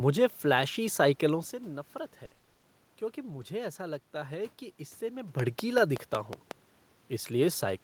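From 2.25 to 2.65 s, repeated packet loss gives the speech a choppy quality with pieces missing. Nine short gaps, the longest 60 ms, are each patched by stretching the previous sound, so about half the stretch is concealed rather than silent. From 3.29 to 3.43 s, a lost packet was rebuilt from error correction. About 80 ms sounds rougher and noisier but never drops out, which fits four packets recovered from low-bitrate copies. Unlike the earlier stretch, it has no stutter. From 5.40 to 6.52 s, a train of clicks ticks at a steady 5.4 per second, roughly seven similar pops about 10 dB above the speech. It is likely caused by electrical interference, because its even spacing and fixed shape don't follow the speech.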